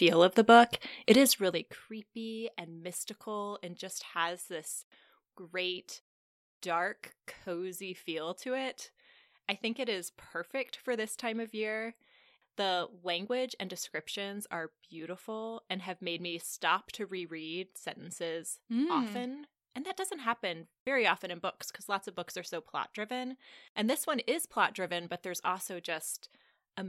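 Just after "of the book", from about 1.09 to 1.79 s, there's zipper noise on the speech. The level drops by roughly 20 dB, but instead of gliding down it goes in 3 dB jumps, around seven a second. Nothing smooths those steps, so each one lands as a tiny click, and you get a ticking, zipping texture riding on the voice while the gain moves.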